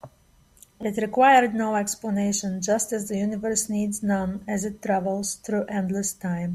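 At 0.83 s the speech jumps: a dropped buffer (overrun), likely because the samples weren't collected before being overwritten. About 3 ms is skipped and the two sides butt together, so there's no gap of silence as in an underrun.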